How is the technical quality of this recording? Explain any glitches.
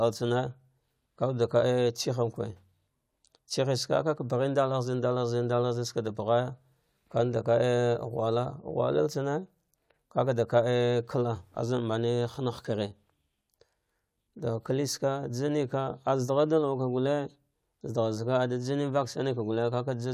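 No technical glitches turn up anywhere in this speech recording. There is nothing in it that calls for explanation.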